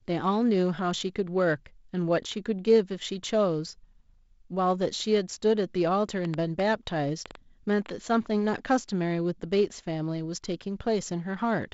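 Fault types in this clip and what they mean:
Train of clicks: from 6.25 to 7.90 s there's a run of about seven same-shaped pops, roughly 4.3 a second at an uneven pace, jumping around 15 dB above the speech, likely from interference or a struggling interface injecting pulses over the G.722-limited sound.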